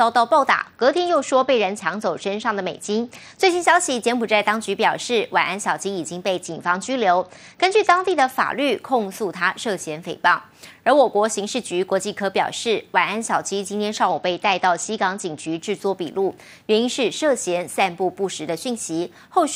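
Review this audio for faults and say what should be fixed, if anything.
A Bluetooth SBC bit pool drop occurs at 0.51–3.49 s, 6.46–8.31 s and 14.09–15.59 s. Treble dulls and gritty noise rises. This fits the bit pool falling from 28 to 9, near 78 kbps, starving the top sub-bands. Reduce link congestion or fix a higher bit pool.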